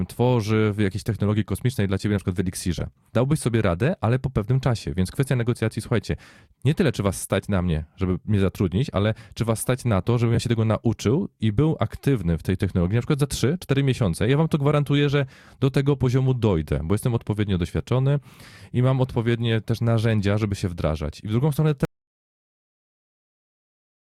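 A brief garbled flutter occurs at 2.78 to 2.83 s and again at 10.34 to 10.38 s. These are frames out of order: two adjacent blocks of about 21.3 ms, one frame each, were swapped and decoded in that sequence, so each short stretch plays with its halves exchanged.

From 21.85 s to the end, the speech cuts off into silence with no room tone. This audio dropout to silence most likely comes from the input being lost while recording continued, writing silence in place of the signal.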